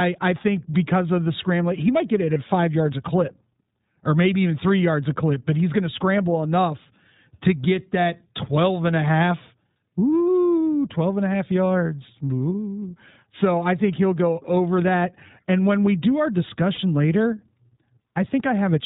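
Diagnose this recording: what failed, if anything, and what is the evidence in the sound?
The codec stage is the cause. The iLBC codec runs through the whole speech clip. Nothing sounds above 4 kHz. The voice is plainly rough and slightly synthetic. Each short frame's excitation is coded on its own. The texture fits the 15.2 kbps mode with 20 ms frames.

The network dropped packets, producing lost iLBC frames. The gaps are at 2.34–2.37 s, between "he might get it" and "five yards a clip", at 12.81 s, and at 16.74–16.80 s, after "when we do our". Each gap is a brief held, slightly buzzy or breathy vowel. The decoder repeats the last pitch cycle with noise. That covers one frame for the first two gaps and two frames for the last. The voice recovers almost at once.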